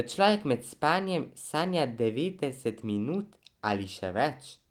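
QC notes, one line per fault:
The speech is carried by Opus voice compression in hybrid mode at about 24 kbps with fullband coverage reaching roughly 20.2 kHz and only light coding damage, and no faults turn up anywhere in the signal.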